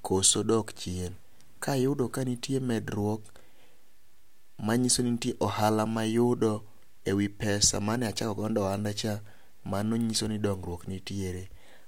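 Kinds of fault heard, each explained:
No technical faults can be heard in this recording.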